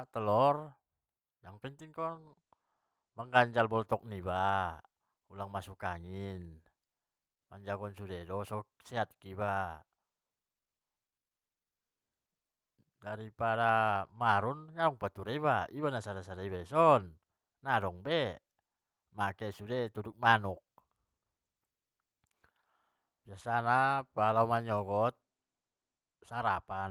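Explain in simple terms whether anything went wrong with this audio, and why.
Nothing went wrong here.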